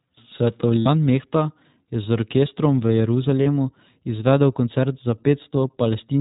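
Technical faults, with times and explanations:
Throughout, iLBC codec: a steady 4 kHz ceiling and a slightly rough, synthetic texture that fits 15.2 kbps iLBC and its 20 ms frames, unlike intermittent dropouts.
0.80–0.88 s and 3.43–3.47 s (after "orkestrom v"), lost iLBC frames: the decoder repeats the last pitch cycle, producing a held, buzzy vowel for 60 and 40 ms. Recovery is instant because each frame decodes independently.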